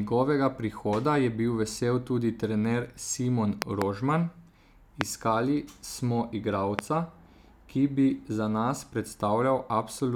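Loud pops in this speech clip fall at 3.62 to 3.84 s, as two pops in quick succession, then singly at 5.01 to 5.03 s and 6.79 to 6.81 s. Each stands roughly 20 to 25 dB above the speech, which carries on beneath them. A sudden voltage step or pulse, likely from a plug, switch, static discharge or driver glitch, is added to the signal, and the following circuitry turns it into a sharp pop.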